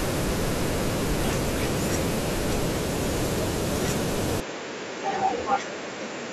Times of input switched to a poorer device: 4.40-6.32

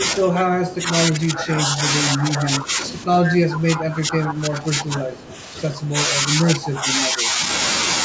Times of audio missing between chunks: none

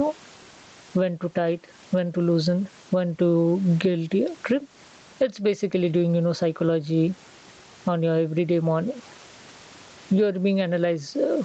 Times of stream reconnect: none

